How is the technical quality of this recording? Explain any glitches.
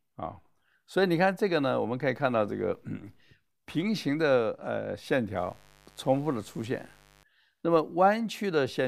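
The recording has one glitch, a burst of mains buzz in the speech from 5.37 to 7.24 s. Switching spikes from a dimmer, rectifier or poorly shielded cable leak into the signal twice per 50 Hz cycle, stacking harmonics into the kilohertz range. The result is a steady, raspy buzz sitting roughly 30 dB below the speech.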